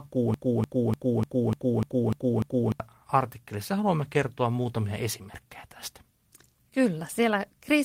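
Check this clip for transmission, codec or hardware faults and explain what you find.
One transmission fault stands out: a broken-record loop from 0.34 to 2.80 s. The player or stream likely stalled and kept resending its last buffered fragment, so a 0.3 s slice of speech repeats eight times back to back, stuttering mechanically, and the intervening speech is lost before "artikkelissa haluamme kertoa muutamia" resumes.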